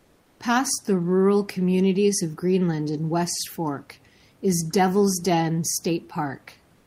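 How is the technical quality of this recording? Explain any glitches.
The technical quality is affected by two brief stretches of comfort noise in place of the background, one at each end of the speech clip.

From 0.00 to 0.39 s, and again from 6.75 s to the end at 6.86 s, the natural background is replaced by a smooth, featureless hiss. It sits about 40 dB below the loudest sound and only about 1 dB quieter than the real background. The likely cause is discontinuous transmission, consistent with Opus DTX: when the sender's voice detector finds no speech, it stops sending audio, and the receiver synthesises noise shaped like the background. The room noise, about 37 dB below the speech, loses its texture during those gaps.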